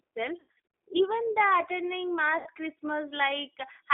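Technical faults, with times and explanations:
Throughout, G.729 codec: everything sits in roughly 300 Hz to 3.6 kHz, with a rough, slightly synthetic texture that fits an 8 kbit/s G.729A coder rebuilding the sound.
0.40–0.59 s and 2.38–2.48 s, VoIP packet loss concealed by the speech codec: the decoder fills gaps of up to 80 ms by stretching its last pitch and filter into a fading buzzy tone or coloured noise, and the sound stays weak briefly afterwards.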